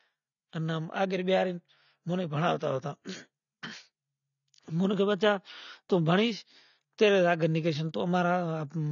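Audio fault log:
Throughout, AAC compression: the speech sounds dull and smeared, with nothing above 7 kHz and a plainly audible warbling, fizzy texture on sibilants and held sounds. This is likely low-bitrate AAC-LC, consistent with about 24 kbps, which strips the upper spectrum and coarsely quantises what remains.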